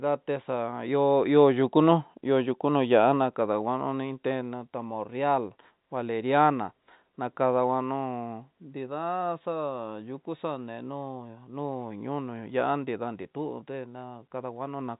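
Nothing stood out on listening to this speech clip, which carries the narrow band of G.711 telephone coding with nothing heard above about 3.8 kHz.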